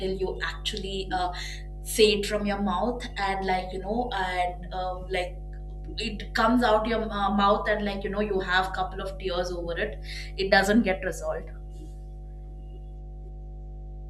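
Mains hum runs through the whole speech clip: a steady 50 Hz tone with low harmonics, sitting only about 10 dB below the voice. A ground loop or nearby transformer has coupled the power line into the signal, leaving a constant drone beneath every phrase.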